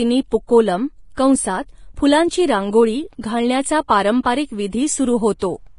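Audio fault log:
Throughout: Vorbis compression. Nothing is heard above 10.6 kHz. The treble sounds hissy and grainy. Consonant attacks are blurred. The likely cause is heavy Vorbis coding, which fits a bitrate near 30 kbps. Coarse treble quantisation turns fine detail into noise.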